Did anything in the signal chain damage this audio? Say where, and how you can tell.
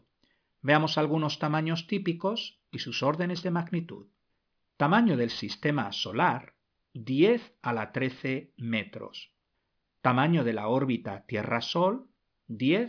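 Yes. A sample-rate conversion with no anti-aliasing filter, which fits a drop from 44.1 kHz to about 11 kHz. Throughout the speech, content above the 5.5 kHz fold reflects back down as aliasing roughly 20 dB below the signal, so sibilants sound gritty and metallic against a hard band edge.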